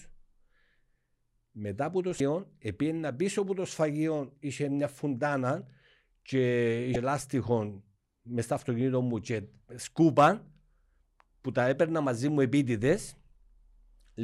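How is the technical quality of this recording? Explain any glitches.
There are two short glitches in this speech recording, both from damaged data in a compressed stream. The first runs from about 2.17 to 2.21 s, the second from 6.93 to 6.96 s, each lasting roughly 34 ms. In both spots a chunk of the compressed data got corrupted, so the decoder misread those frames, lost its place and had to hunt for the next valid frame header. You hear each one as a brief glitch cutting across the audio.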